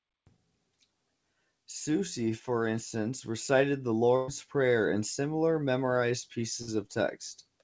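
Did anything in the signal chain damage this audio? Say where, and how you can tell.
Yes. At 4.16 s the sound turns into a short held, fading tail for about 120 ms before resuming at 4.31 s with a piece visibly skipped. The same thing happens from 6.62 to 6.71 s, just after "and similar memorised", this time lasting about 60 ms. This is a burst of packet loss on the network leg of the call path, which is band-limited to 8 kHz. Consecutive packets never arrived in time, so the receiver stretched and faded the last audio it had, then jumped ahead, dropping the span in between.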